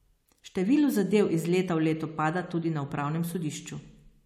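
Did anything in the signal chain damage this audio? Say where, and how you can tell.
No, nothing along the chain seems to have damaged this bit of speech; I can't hear anything in it that points to a problem at any stage.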